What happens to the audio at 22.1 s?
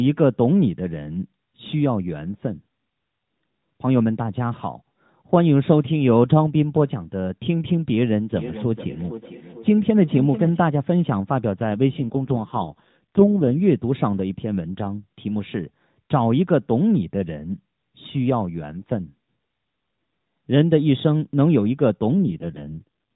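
An AMR rate drop starts at 22.14 s and lasts to the end, 23.16 s. The codec falls from 12.2 to 4.75 kbps, trading detail for error protection. Speech turns rougher and more synthetic, with no gap or band change.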